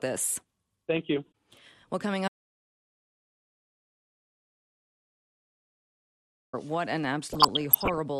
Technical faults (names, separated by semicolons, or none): MP2 compression; audio dropout to silence; DAB burbling